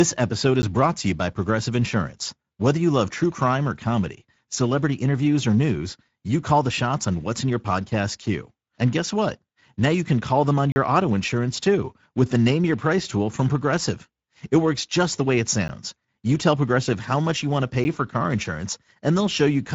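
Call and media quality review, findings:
Speex encoding throughout, plainly audible: too few bits for the CELP excitation at this setting leave the speech hoarse and grainy, with nothing above 7.7 kHz. Consistent with roughly 16.8 kbps wideband mode.

Blocks of digital silence, probable output buffer not filled in time: audio cuts out and back with no fade. 10 ms ticks at 0.62 s, before "brought to you by", at 15.68 s, and at 17.84 s, between "much you want to" and "for car". 40 ms hole at 10.72–10.76 s, between "can call them on" and "auto insurance too with".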